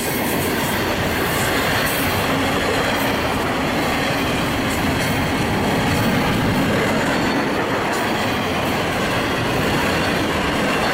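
Nothing in the recording stood out as a technical problem on listening.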